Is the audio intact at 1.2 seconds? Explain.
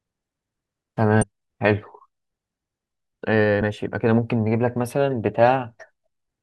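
No. Damaged data in a compressed stream breaks the speech from about 1.22 to 1.24 s. Corrupted bytes there make the decoder misread the frames and lose sync while it hunts for the next valid frame header. The result is a brief chirp or blip.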